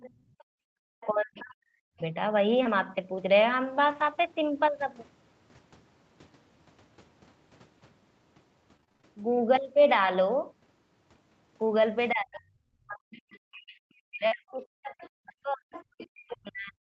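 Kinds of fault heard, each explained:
Other side's voice leaking through: A second, fainter voice sits under the talker. It is heard from the start to 2.01 s at about 25 dB below the speech, in a brief scrap at 13.31 to 13.39 s at about 30 dB down, and from 14.49 s to the end at about 20 dB down. The likely cause is the far end playing on a loudspeaker, with the echo canceller leaving part of it in the microphone.
Background gated by the echo canceller: From 0.14 to 0.81 s the room sound sinks sharply and then comes back. The deepest drop is about 36 dB, and the whole dip lasts around 0.7 s. The canceller heard the loudspeaker playing and pulled the microphone down hard. The room tone vanishes under it for that moment, then returns once the canceller releases.
Speech suppressed in double talk: The talker's own voice dips and breaks up. This happens from 1.05 to 2.01 s, about one second in all. 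It happens again from 12.13 s to the end. The deepest drops reach roughly 40 dB, so parts of the speech nearly disappear. Both sides likely talked at once, and the echo canceller turned everything down together.
Short concealed packet loss: Two brief holes in the stream were patched by the receiver. It carried the last sound forward, then blended back into the real audio. The first is at 2.63 to 2.67 s, with 20 ms missing. It gives a brief smear. The second is at 14.27 to 14.33 s, with 40 ms missing. That one is long enough to blur a short sound.
Lost packet rebuilt from error correction: Inside each of those two holes, one 20 ms packet came back from a low-rate copy. Opus carries that copy in the packet that follows. The copies play at 2.65 s and 14.31 s. They leave no silence. Instead they sound rougher and noisier than the audio around them. The call tops out at 8 kHz, so there is no high band here to lose.
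Repeated packet loss (robotic sound): From 8.77 to 9.91 s, packets drop out again and again. Seven gaps come in quick succession. Together they cover about 140 ms, and the longest is 29 ms. About 13 percent of the stretch is concealed, with a small part rebuilt from error correction. Each patch is followed soon after by the next one. The speech turns choppy, with small pieces missing.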